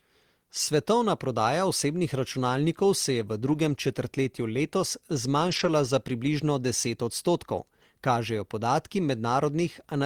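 Lost packets rebuilt from error correction show up in this speech clip at 3.47 to 3.57 s and again at 5.47 to 5.69 s, about 60 ms and 120 ms of rebuilt audio, which fits three and then six separate lost packets. There is no gap or dropout. Each missing stretch was filled from a low-bitrate copy carried in the following packet, so those moments sound rougher and noisier than the surrounding speech.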